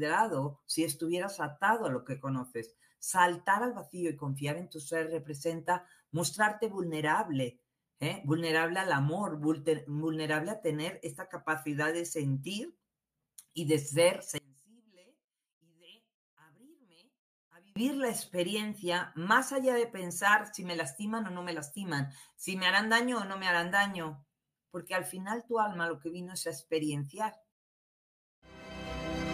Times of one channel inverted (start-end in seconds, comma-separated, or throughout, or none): 14.38-17.76